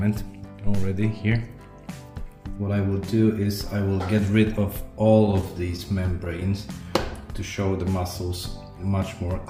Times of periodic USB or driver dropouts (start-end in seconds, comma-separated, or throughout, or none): none